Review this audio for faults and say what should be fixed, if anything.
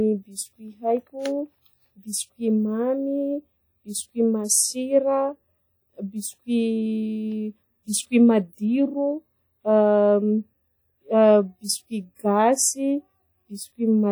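The whole thing, start to finish, has that smeary transform-codec character: it rings, the background goes washy, and a hiss swells and fades with the speech. That's plainly audible and most likely WMA compression. Quantisation noise from long transform blocks smears across tens of milliseconds around each sound, and the thin, zeroed-out detail points to a low bitrate, something like 48 kbps. To avoid it, go back to the original recording or re-export at a much higher bitrate, or in a lossless format.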